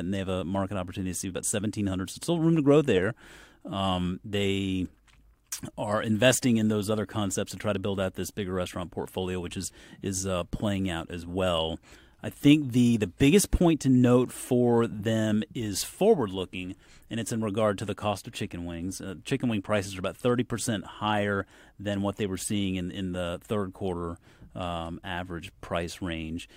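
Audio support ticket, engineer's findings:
No audible faults found on this speech recording.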